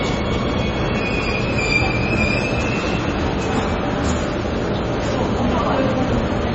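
MP3 compression runs through the whole clip: the treble stops dead at 8 kHz, and the sound has a heavy watery, swirling texture with smeared onsets. This is likely an MP3 encode starved of bits, consistent with a rate of around 24 kbps. The encoder sacrificed the top band outright and dropped quieter frequency components that flicker on and off from frame to frame, producing that shifting, metallic wash.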